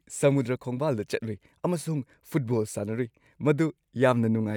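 Nothing in this speech recording stands out as a technical fault, so there's nothing to point to along the way.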